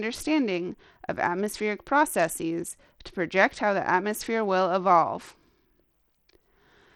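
A low-bitrate Bluetooth link, likely using SBC compression, runs through the whole of this speech clip, with damage that is plainly audible. The codec splits the signal into a few wide bands and hands out too few bits, so the upper bands are starved and the rest coarsely quantised. The treble thins and flickers in and out, while a gritty, grainy noise with aliasing rides on the speech, which fits a rate of about 80 kbps.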